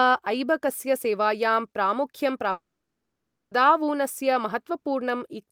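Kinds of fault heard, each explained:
Long network dropout: at 2.51 s the speech stops abruptly and the last sound is stretched into a brief buzzy continuation that dies away within roughly 80 ms, leaving about 0.92 s of silence. At 3.53 s the speech resumes mid-flow with about a second of material simply gone rather than delayed. This is likely a stall in packet delivery where the receiver concealed the gap briefly, then muted until data arrived again.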